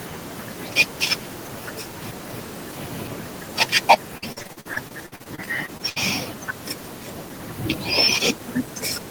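At 3.90 to 3.95 s the loudest peaks flatten out, which points to microphone overload. The input likely ran about 6 dB too hot for the converter. A sizeable share of samples lose their tops, giving that syllable a harsh, crackling edge.

From 4.17 to 5.98 s comes repeated packet loss, heard as robotic sound. Audio keeps dropping out in short holes, the longest 66 ms. Each hole is filled by stretching the previous sound. Nearly a third of the stretch is patched this way, so it sounds choppy, with pieces missing.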